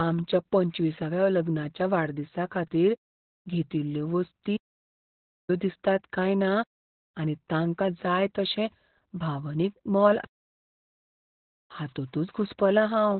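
From the very start the speech carries heavy Opus voice compression damage. Nothing gets through above about 4.3 kHz, so it's squeezed into a narrowband phone-like range that sounds muffled and boxy. The excitation is coarse too, which adds that hoarse, slightly robotic grain to the speech. That all fits the SILK coder running at a very low rate, something like an 8 kbps stream, where it trades away both bandwidth and detail just to keep the speech intelligible.

Then there are two playback stalls. At 4.56 s the sound cuts out mid-flow and stays silent until 5.50 s, a gap of about 0.92 s. The same thing happens again from 10.24 s to 11.20 s, roughly 0.94 s this time. Both gaps sound like the player likely ran dry of data or had its thread blocked, so the output simply went quiet until it caught up.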